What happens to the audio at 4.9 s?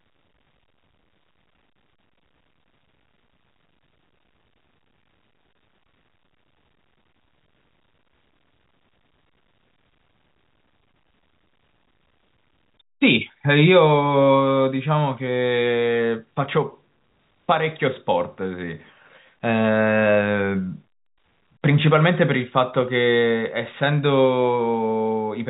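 Nothing goes wrong at 4.9 s; the speech there carries on intact through its telephone-band G.711 path, with no dropout, click or other fault at that moment.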